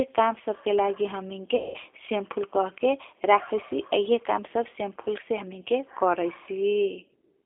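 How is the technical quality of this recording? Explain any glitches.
The recording has clear low-bitrate telephone coding throughout and one short dropout early on.

G.729 codec, throughout: The audio has been squeezed through a G.729-type speech codec, which fits an 8 kbit/s VoIP line. Rather than sending the waveform, it sends a vocal tract filter, a pitch predictor and a handful of pulses per 10 ms frame, and the receiver resynthesises speech from those. The band is held to roughly 300 Hz to 3.5 kHz, so the speech sounds thin and boxed-in, and the coding roughness is plainly audible as a slightly synthetic, gritty edge.

VoIP packet loss concealed by the speech codec, 1.56 to 1.77 s: Right after "काम सबके लागि हमिंग", about 180 ms of audio went missing in transit. The decoder covered the gap by extending its last pitch and filter settings while turning the gain down frame by frame. 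The lost stretch therefore comes out as a smeared continuation, a buzzy tone or coloured noise, that sags in level, and because each frame builds on the one before, the speech stays weak or distorted for a moment after the stream resumes.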